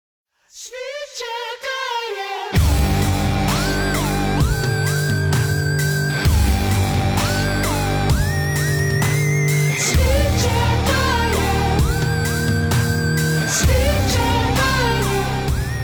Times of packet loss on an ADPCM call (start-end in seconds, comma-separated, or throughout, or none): none